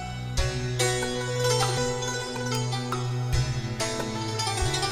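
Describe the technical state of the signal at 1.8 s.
A skip ahead at 1.77 to 1.79 s: roughly 0.4 s of audio was dropped while later audio was already queued, so playback jumps forward almost seamlessly, with no gap filled.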